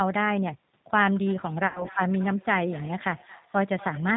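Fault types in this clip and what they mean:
G.729 codec: The speech throughout sounds slightly rough and synthetic, with nothing above 4 kHz. It is coded at 8 kbit/s, and each 10 ms frame is rebuilt from a vocal tract filter, a pitch estimate and a few pulses, so fine detail is lost.
Feedback echo between two devices: From about 1.26 s to the end, each phrase comes back roughly every 200 ms, thinner and ringing, peaking at about 19 dB below the speech. A second device in the room replays the call into the microphone, and neither echo canceller removes it.
VoIP packet loss concealed by the speech codec: Between 1.67 s and 1.88 s the speech smears into a buzzy tone or coloured noise that fades, and stays weak briefly afterwards. About 80 ms of audio went missing, which fits four lost packets, and the decoder filled the gap from its last pitch and filter.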